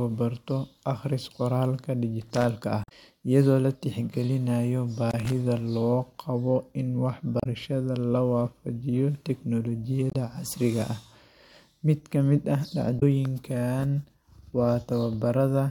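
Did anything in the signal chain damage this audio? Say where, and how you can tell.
Yes. Twice the speech is broken by a short, irregular burst of scratchy crackle, from 2.22 to 2.44 s and from 5.10 to 5.32 s, each lasting roughly a fifth of a second. That ragged, uneven texture is loose connector crackle in the analogue wiring. A worn or dirty contact in a plug or jack flickers between making and losing contact as it shifts, chopping the signal on and off.

Four brief chirps or blips cut into the audio: 2.81 to 2.92 s, 7.40 to 7.46 s, 10.09 to 10.15 s, and 12.96 to 13.03 s, each well under a tenth of a second apart from the first. These are damaged data in a compressed stream, a fault in the codec or stored file. Where bytes were lost or corrupted, the decoder misreads those frames, loses sync, and has to hunt for the next valid frame header, producing a brief synthetic squawk in place of the sound.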